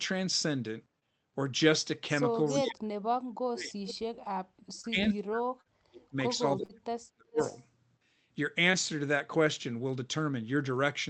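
At 0.99 s, short concealed packet loss: about 20 ms of audio failed to arrive, and the decoder extended the preceding sound to cover it, leaving a brief smear. From 2.46 to 2.68 s an echo leak, likely from a loudspeaker's echo canceller letting its pickup through, returns a copy of the speech about 0.37 s late and roughly 15 dB down. From 2.6 to 3.8 s the speech is suppressed in double talk, likely because the canceller clamped down while both sides talked, so the level dips by up to about 40 dB in pieces. Another faint echo follows at 3.87 to 3.95 s. Suppression returns from 4.66 to 6.19 s, with concealed losses inside it at 4.81 s (20 ms) and 5.61 s (40 ms). It appears again from 6.38 to 7.39 s, with a 40 ms loss at 6.65 s. From 7.37 to 7.66 s an echo trails about 0.39 s behind, around 20 dB down. A final 20 ms concealed gap at 8.71 s adds one more short smear.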